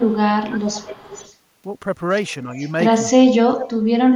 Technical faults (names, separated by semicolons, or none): speech suppressed in double talk; echo leak